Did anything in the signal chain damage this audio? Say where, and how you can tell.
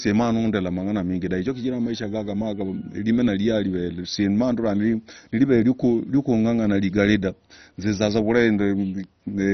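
Yes. Codec stage: nothing above 6.1 kHz, with gurgling, granular distortion throughout. This is likely heavy MP2 compression, bands switched off and coarsely quantised, fitting a 32 kbps stream.

A bit error spike at 9.04 s, in storage or a digital link. One sharp, broadband tick unrelated to the speech. A flipped bit made the sample jump, then return.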